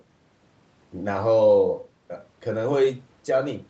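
Listening to this speech clip, nothing stood out as a technical problem.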